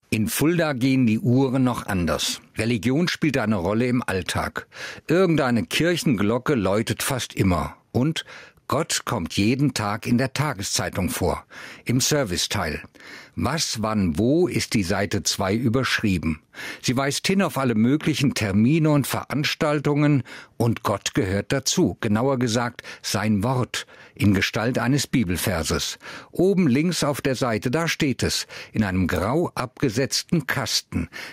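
Throughout the speech, the gain is pulled down as each loud syllable arrives, swinging by around 10 dB and leaving the delivery squashed and flat. This gain pumping likely comes from input gain set far too high, with a fast limiter clamping down on each peak.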